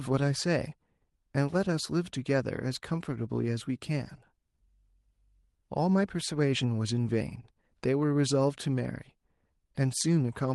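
Speech, with no technical faults to be heard.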